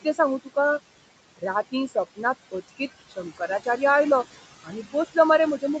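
Noise suppressor artifacts run through the whole clip. The suppressor pulls the steady room noise down by about 19 dB frame by frame, so the background, which sits about 15 dB below the speech, drops away in gaps and returns beneath the speech.

Speech cut by the noise suppressor occurs four times, where the suppressor misjudged parts of the speech as noise and turned them down: 0.02–0.19 s (up to about 15 dB), 0.44–0.57 s (about 18 dB), 3.09–3.79 s (about 17 dB) and 4.64–4.95 s (about 15 dB). These stretches sound swallowed and faint.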